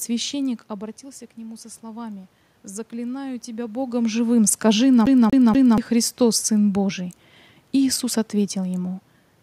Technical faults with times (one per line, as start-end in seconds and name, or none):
0.67-4.02 automatic gain rising
5.06-5.78 CD stuck on one turn